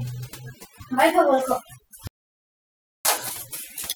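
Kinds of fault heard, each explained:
Overdone noise removal: noise reduction set too aggressively suppresses bands near the noise floor throughout, leaving twinkling specks over near-silent background.
Audio dropout to silence: from 2.07 to 3.05 s the speech cuts to digital silence without room tone, losing about 0.98 s, likely from a briefly lost input.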